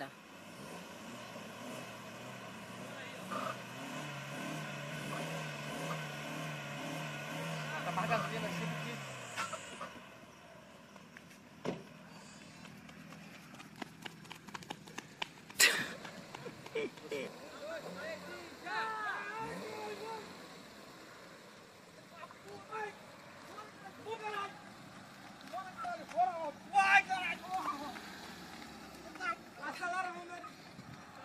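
The audio has compressed frames skipped at 4.90, 14.56, 22.69 and 24.13 s. Several frames of about 46.4 ms each go unplayed, so the sound jumps ahead by a tenth of a second to 0.3 s.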